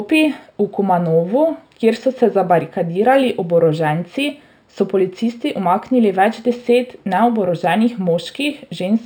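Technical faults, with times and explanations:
Throughout: imaging from linear upsampling. The rate was raised by straight-line interpolation, which fits a step from 12 kHz to 48 kHz. The top of the band is dulled. A faint mirrored copy, roughly 35 dB down, sits between 6 and 12 kHz, adding metallic shimmer to sibilants.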